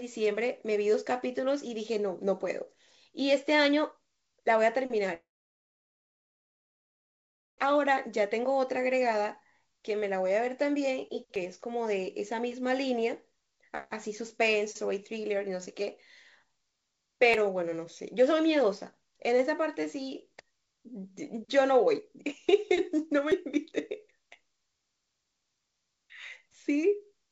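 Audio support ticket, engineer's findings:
Long network dropout, 5.14–7.64 s: about 2.5 s of sound lost; brief fading fill, then roughly 2.4 s of silence before audio resumes. Likely cause: network packet loss exceeding jitter-buffer concealment.

Audio missing between chunks at 11.36, 17.34 and 23.32 s: short skips of about 20 ms, every 6 s, joined without silence. Likely cause: chunked capture dropping audio at each boundary.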